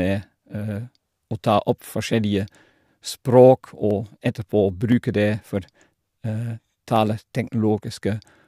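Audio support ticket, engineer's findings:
Periodic USB or driver dropouts in speech, 0.83 s to 7.98 s. Regular ticks every 1.02 s, about seven in total, heard only while sound is present. Each loses well under a millisecond, skipped rather than silenced. Probable component: USB audio interface or driver stalled at a fixed interval by a background task. Spectrogram: thin broadband vertical lines evenly spaced. Waveform: small step discontinuities at each splice, no flat gaps.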